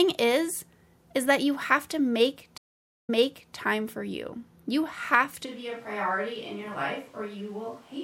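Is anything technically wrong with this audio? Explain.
Yes, two faults. From 2.58 to 3.55 s, a stream reconnect: the speech drops out for about half a second, then resumes 0.47 s earlier, repeating material as the restarted decoder picks up mid-stream. From 5.47 s to the end, the speech turns hollow, roomy and thinner in the bass, roughly 5 dB quieter with audible background noise. This is likely a switch to a distant microphone after the close one failed.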